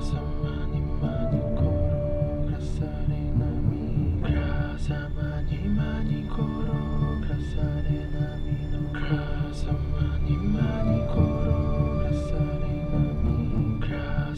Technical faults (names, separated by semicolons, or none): none